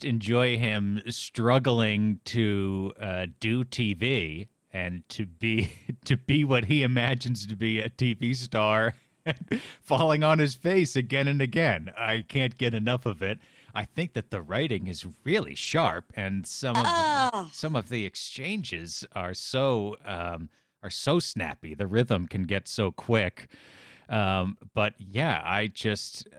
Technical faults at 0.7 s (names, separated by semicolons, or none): lost packet rebuilt from error correction